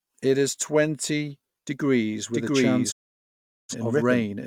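From 2.33 s to the end, a second copy of the speech is mixed in, likely because the signal is being captured again through a slower path or an edit has left two copies out of step. This doubled audio track trails the original by around 0.7 s at roughly the same level. The copy cuts in abruptly and carries no decay or added room colour, so the speech sounds like two identical talkers speaking over each other in a fixed, clean echo.

At 2.90 s the receiver stops getting valid digital frames, so it mutes the output until good data returns at 3.75 s. This digital broadcast dropout fades the speech to silence over about 20 ms and leaves a hole of about 0.77 s, which fits a run of 18 frames failing in a row. Everything transmitted during that gap is simply missing. When sound comes back, it resumes later in the programme rather than picking up where it stopped.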